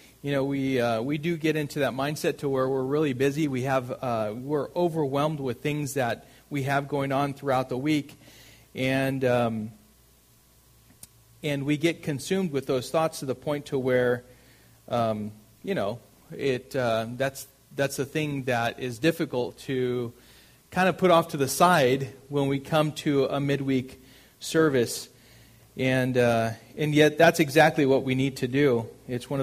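Listening through, nothing stood out as a technical fault at any point.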